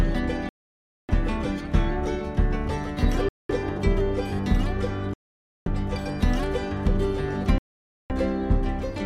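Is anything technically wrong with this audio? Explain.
Yes. The sound drops to dead silence at 0.49–1.11 s, 3.29–3.51 s, 5.14–5.68 s and 7.58–8.12 s, then resumes. These gaps, about 0.21 to 0.6 s long, are likely Bluetooth stalls, where the headphone buffer ran dry while delayed packets were resent. On a waveform each shows as a flat line, and on a spectrogram as an empty vertical band.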